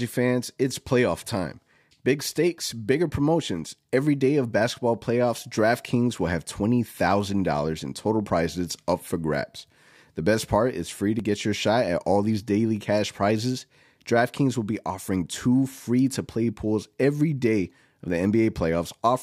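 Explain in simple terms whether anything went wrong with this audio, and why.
Twice the speech jumps ahead abruptly, as if a tiny sliver of sound were snipped out and the two sides butted together: at 11.20 s, between "part is free to" and "get your shot at", and at 18.08 s, just after "pools every day of". Each gap is roughly a hundredth of a second. This is likely a dropped buffer (overrun): the recording software fell behind, the hardware overwrote a short chunk before it was saved, and that chunk was lost.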